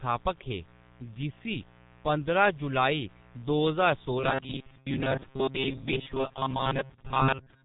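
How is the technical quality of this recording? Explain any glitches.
The technical quality is poor. Three faults are audible.

A mains buzz runs throughout. Switching spikes, twice in every 60 Hz cycle, leak into the signal and add harmonics. The result is a steady, raspy buzz about 30 dB below the speech.

The G.723.1 codec is also present throughout. This early telephony codec runs at 6.3 kbit/s and passes nothing above 3.8 kHz. Its heavy damage leaves the speech muffled and hoarse, with smeared consonants.

From 4.18 s to the end, right after "दो ज्हार", the speech turns robotic. The likely cause is short buffers replayed while fresh audio arrives late. Most of the sound is repeats, which impose a metallic 133 Hz buzz. That pitch points to roughly 7.5 ms buffers.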